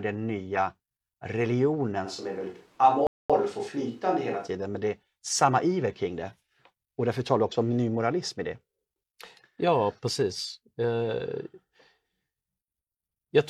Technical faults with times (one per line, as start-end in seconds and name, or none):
2.07-4.46 switch to a distant microphone
3.07-3.30 rebuffering stall